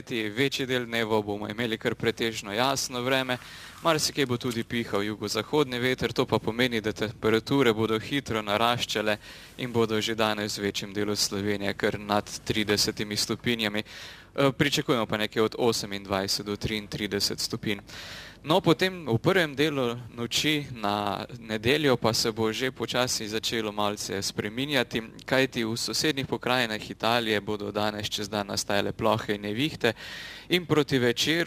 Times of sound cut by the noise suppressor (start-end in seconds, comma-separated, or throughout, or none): none